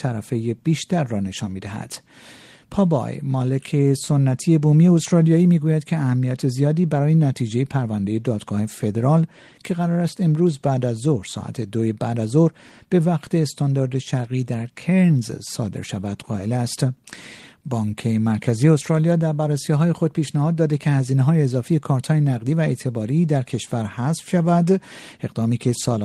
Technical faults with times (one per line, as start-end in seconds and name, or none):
none